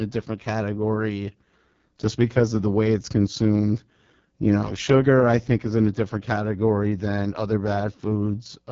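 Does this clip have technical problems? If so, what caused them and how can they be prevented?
Yes. The speech has passed through the AMR wideband (HD Voice) codec at a very low rate, and the heavy damage throughout fits its lowest 6.6 kbit/s mode. At that rate the codec rebuilds speech below 6.4 kHz from a coarse pulse-driven vocal tract model and fills the band above with shaped noise, so the sound is rough and raspy, with nothing above 7.5 kHz. Prevent it by running the link at 12.65 kbit/s or higher.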